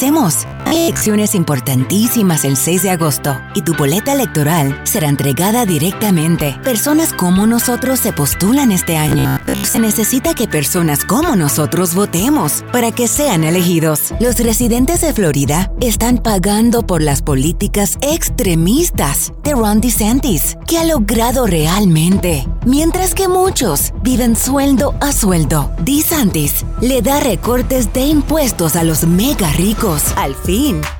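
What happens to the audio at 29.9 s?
Nothing goes wrong at 29.9 s; the audio runs through that moment intact, with no dropout, click or distortion.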